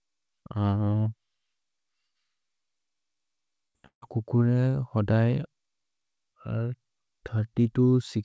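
At 3.68 to 3.76 s there is a burst of packet loss: the receiver continues the last sound and fades it for about 66 ms, then jumps ahead past roughly 60 ms of lost speech. On a spectrogram the continued sound runs flat and smeared, then breaks off abruptly.

From 3.86 to 4.04 s the last sound is again continued and faded over about 153 ms, ending in about 100 ms of silence before resuming, with about 160 ms missing. This is likely a long network dropout. The waveform shows a decaying envelope, then a flat line. As in the rest of the clip, nothing appears above 8 kHz, which fits the G.722 call codec.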